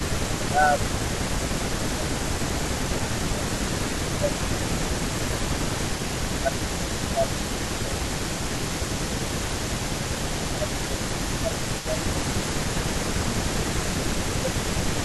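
From 0.05 to 3.51 s, and again at 3.98–4.76, 5.68–8.91, 10.14–12.26 and 13.2–14.77 s, the speech dips by about 10 to 15 dB, likely speech suppressed in double talk. From 0.06 s to the end, a copy of the speech returns about 300 ms late and about 10 dB down, likely an echo leak from a loudspeaker path the canceller did not fully clear.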